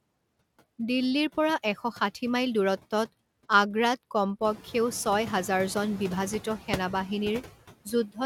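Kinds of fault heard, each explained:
Noise suppressor artifacts: The background dips away in the pauses and swells back up under the speech. A noise suppressor is estimating the steady noise and pulling down, frame by frame, every frequency band it judges to be noise, by about 19 dB here. The pumping is easiest to hear after the room noise rises by about 13 dB around the midpoint, where it sits about 14 dB below the speech.
Speech cut by the noise suppressor: Right at the end, from 7.85 to 8.19 s, the sound turns faint and swallowed, as if the tail of the speech were being dragged down along with the background. The suppressor mistook this stretch of speech for noise and turned it down by as much as about 19 dB, with around 150 ms affected in total.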